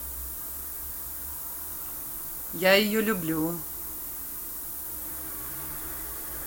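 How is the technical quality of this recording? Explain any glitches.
The quality is poor: a loud hiss sits under the speech for the whole clip. Throughout, a steady, thin hiss climbs sharply toward the treble, roughly as loud as the speech itself. This is low bit depth with noise shaping: at 6 bits, the rounding error is pushed upward in frequency.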